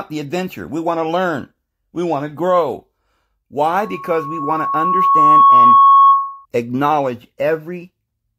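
From 3.70 to 6.46 s there's loudspeaker feedback squeal, a 1.1 kHz tone. The mic is catching its own speaker, and the loop swells over a second or two to about 10 dB above the speech.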